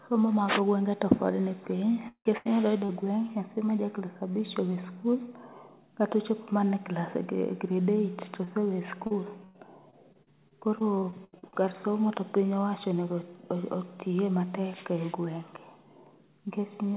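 From 2.08 to 2.91 s there's repeated packet loss (robotic sound): four holes, the longest about 0.17 s, covering roughly 38% of that stretch. Each gap gets patched by stretching the last bit of audio, so it turns choppy.

At 8.45 to 8.49 s there's a short concealed packet loss. About 20 ms never arrived, the receiver filled it in and blended back, and you hear a quick smear or wobble.

From 9.07 to 11.55 s the robotic packet loss returns, with twelve gaps, the longest about 0.1 s, concealing around 19% of the span. It's lighter than the first burst but still choppy. Throughout, nothing sits above 4 kHz, which fits a narrowband call codec on the path.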